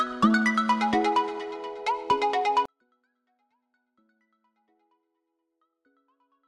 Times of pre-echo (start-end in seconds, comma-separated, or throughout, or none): none